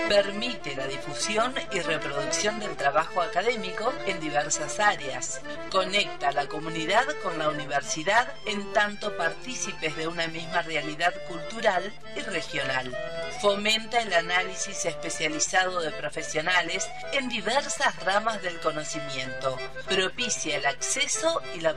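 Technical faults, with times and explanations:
No technical faults, with times or otherwise, can be heard in this audio.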